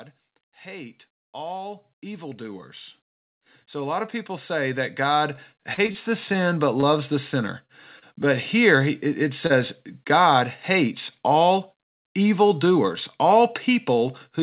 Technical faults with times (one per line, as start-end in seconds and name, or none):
0.63-7.47 automatic gain rising
5.36-5.97 repeated packet loss (robotic sound)
6.81-6.98 short stall from a late packet
7.66-7.72 short concealed packet loss
7.99-8.05 short stall from a late packet
9.47-9.52 short concealed packet loss